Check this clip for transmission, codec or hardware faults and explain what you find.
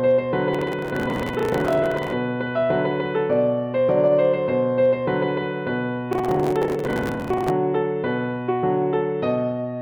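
One fault appears twice: processor overload crackle, at 0.53–2.13 s and 6.13–7.5 s. Overloaded processing misses dozens of deadlines again and again, each repeating a stale fragment of roughly 10 ms with hard edges. The result is a burst of gritty tearing, not the isolated click of a single dropout.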